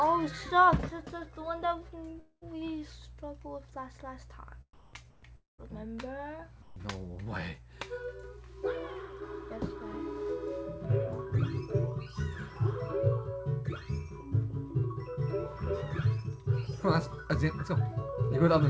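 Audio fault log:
2.20–2.43 s and 5.37–5.60 s, long network dropout: Each gap runs about 0.24 s. The receiver carries the last bit of sound on as a fading buzz for roughly 215 ms, then goes quiet: about 50 ms of silence in the first gap, about 160 ms in the second. The audio then picks up again with around 220 ms simply missing. The likely cause is a network stall that swallowed a burst of packets, so the concealment had nothing real to bridge with.
4.73–4.93 s, 5.11–5.23 s and 6.62–6.76 s, comfort noise in place of the background: In these quiet stretches, lasting 200, 120 and 140 ms, the real background, sitting around 23 to 27 dB below the loud parts, gets swapped for a flat, featureless hiss. It dips by about 6 dB in the first and about 8 dB in the other two. The likely cause is the sender's discontinuous transmission cutting out in the pauses while the receiver synthesised rough background noise, so the texture goes smooth and the level sags until the sound resumes.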